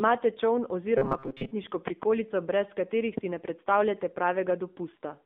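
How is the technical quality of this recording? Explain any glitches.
The technical quality is poor: the speech is band-limited and audibly coded throughout, with two distinct glitches.

Throughout, the speech sounds thin, buzzy and somewhat synthetic, with nothing below about 200 Hz or above 3.6 kHz. That is the AMR narrowband mobile codec. It rebuilds the voice from a simple vocal-tract model with few pulses, and the damage fits a low bitrate, around 7.4 kbps.

From 0.98 to 1.52 s the speech turns into a rigid, metallic buzz at 134 Hz that still loosely tracks the speech. This is robotic sound from repeated short buffers. Late audio was likely covered by looping a stretch of about 7.5 ms, with roughly half the real signal skipped.

At 3.18 to 3.20 s a single loud pop sits about 20 dB above the speech, which carries on underneath. A sudden voltage step or pulse, likely from a switch, static or a driver glitch, was added to the signal.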